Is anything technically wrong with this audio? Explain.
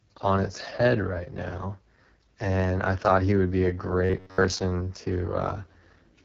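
Yes. There are two faults.

Throughout, the speech carries AMR wideband (HD Voice) codec damage. It sounds rough and raspy, which fits the codec's lowest rate, around 6.6 kbit/s. The codec models speech as pulses through a vocal tract filter. At this rate that model is crude. Nothing is present above 7 kHz.

From 4.05 to 4.60 s the speech turns robotic, likely from repeated short buffers. New audio arrived too late, so a fragment of about 11 ms was played again and again. That repetition imposes a fixed 93.8 Hz buzz. Most of the audio in this stretch is repeats, heard as a rigid, metallic drone.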